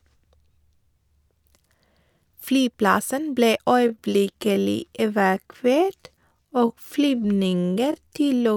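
From 3.74 s to the end, a time-stretched section slows the speech to about 0.65 times its pace. The pitch holds, but it drags, likely from repeated short pieces.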